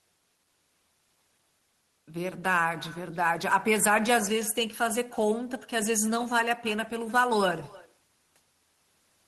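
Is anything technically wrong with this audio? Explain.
Yes. Throughout the speech there is echo with no canceller: every phrase is followed around a third of a second later by a faint, thin copy about 22 dB below the direct sound. The far end is playing the call through a loudspeaker, its microphone picks that playback up, and nothing subtracts it before it returns across the network. The delay is the round trip. The high end of the call-codec path stops near 12 kHz.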